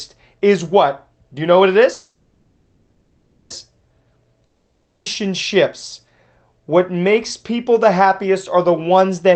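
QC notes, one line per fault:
1.93–3.53 s, call audio freeze: just after "you know what it", the last sound is stretched into a fading buzz that runs about 1.6 s, with only a trace of silence of about 20 ms. When the audio resumes it carries on exactly where it stopped, so nothing is lost but everything after is pushed about 1.57 s later. This pattern points to packets likely held up in transit, leaving the jitter buffer empty while the receiver filled the wait.
4.46–5.09 s, long network dropout: the sound again smears into a decaying buzz for about 0.6 s with no clean silence, but this time the audio comes back further on, with that 0.6 s of material simply missing. The receiver was covering a stretch for which no audio ever arrived, likely packets lost outright rather than delayed. Over the top lies the band-limited call-codec sound, with content above about 8 kHz gone, which fits an Opus wideband call path.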